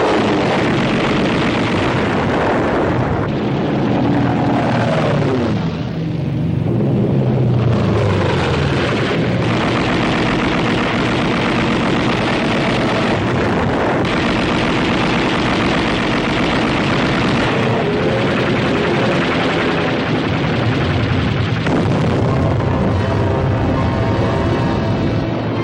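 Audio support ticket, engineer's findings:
No fault found; audio checked, nothing to report for this ticket.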